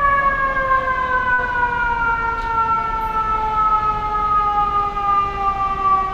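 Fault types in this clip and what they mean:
Short stall from a late packet: around 1.33 to 1.40 s, a sound is held about 48 ms too long while a late packet arrives. Nothing is lost, and playback then resumes from the same place.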